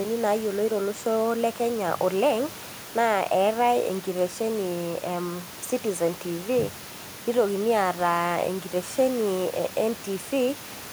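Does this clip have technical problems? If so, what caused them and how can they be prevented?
No, this clip has no technical problems, so there is nothing that needs preventing.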